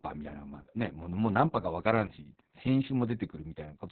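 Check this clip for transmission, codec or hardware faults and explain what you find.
The whole clip carries heavy Opus voice compression. From start to finish the speech is narrowband, pointing to a SILK linear-prediction coder running at a very low rate, around 6 kbps. Everything above roughly 4 kHz is discarded, and the excitation is coded coarsely, leaving the voice muffled, hoarse and faintly robotic. A spectrogram shows a hard ceiling near 4 kHz with smeared, blocky harmonics. The waveform looks smoothed and lacks sharp consonant transients.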